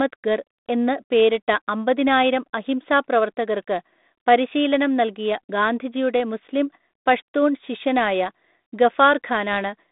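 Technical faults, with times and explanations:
Nothing stood out on listening; the speech comes over a 32 kbit/s G.726 telephone channel, which can be heard in its narrow band of roughly 200 Hz to 3.7 kHz.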